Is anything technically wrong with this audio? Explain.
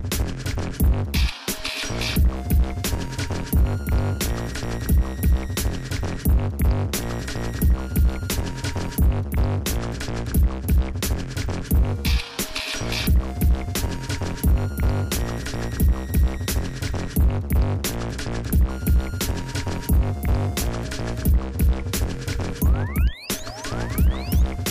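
No, nothing technically wrong can be heard here.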